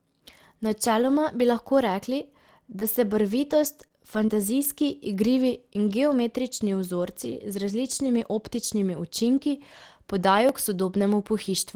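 Short concealed packet loss at 2.79 to 2.83 s, 3.88 to 3.92 s and 4.26 to 4.30 s: each time about 20 ms of the speech arrived too late to decode, and the receiver bridged the hole by extending the preceding sound, heard as a brief smear or wobble.

A lost packet rebuilt from error correction overlaps the first and last of those spots, at 2.81 to 2.83 s and 4.28 to 4.30 s, and also occurs alone at 3.05 to 3.07 s and 4.14 to 4.16 s. Each 20 ms frame was replayed from a low-bitrate copy carried in the next packet, so there is no gap, but those moments sound rougher and noisier.

Dropped samples at 7.92 s and 10.49 s each give a single sharp click. The likely cause is that well under a millisecond of samples went missing, so the waveform jumps straight to a later value.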